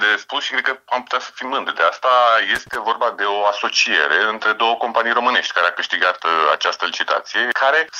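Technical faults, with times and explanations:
2.55–2.75 s, loose connector crackle: a short, irregular burst of scratchy crackle lasting about 0.2 s, breaking up the sound for that stretch. A worn or dirty contact in the signal path is making and losing connection many times in quick succession, so the audio is chopped on and off at random. Any DC present on the line jumps at each break and remake, which adds pops within the crackle.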